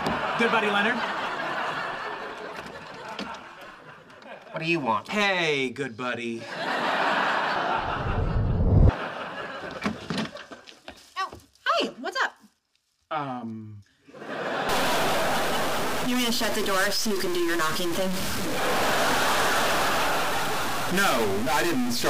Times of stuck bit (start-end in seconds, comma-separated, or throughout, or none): 14.69-22.09